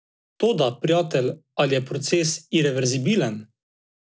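Throughout, there's a 50 Hz buzz riding on the speech: the resampler restarted on every 20 ms block, likely in a 44.1 kHz to 16 kHz conversion, leaving an edge error per block.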